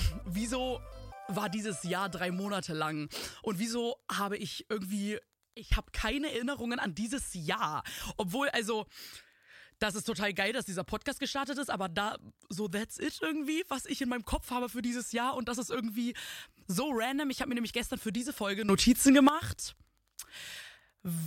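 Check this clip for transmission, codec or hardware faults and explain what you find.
There are two faults in the clip, both sudden gain jumps. The first runs from 5.55 to 5.72 s, where the level drops by about 13 dB. The second runs from 18.69 to 19.29 s, where it rises by about 12 dB. Each time the sound and its background noise step to the new level together, with no fade. The likely cause is a digital gain setting or bit shift applied from one sample to the next without a ramp.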